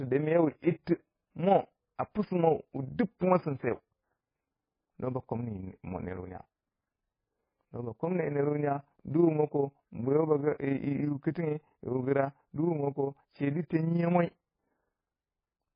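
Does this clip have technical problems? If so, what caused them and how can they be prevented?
Yes. The speech is watery and swirly throughout. Heavy damage like this is likely MP3 compression at a very low bitrate, around 15 kbps. Starved of bits, the encoder dropped weak frequency lines. Prevent it by encoding at 128 kbps or higher, or by keeping a lossless copy.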